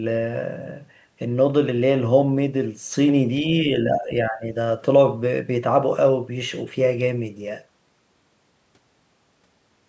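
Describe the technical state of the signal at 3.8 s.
The echo canceller likely mistook overlapping talk for its own echo, causing speech suppressed in double talk from 3.42 to 4.49 s, with the speech dipping in pieces by roughly 15 dB.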